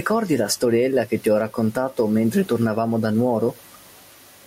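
Gain pumping runs throughout: the room noise, about 41 dB below the speech, swells by around 10 dB in gaps and ducks under loud sounds, likely from excessive gain hitting a fast limiter, unlike a gate, which cuts rather than breathes.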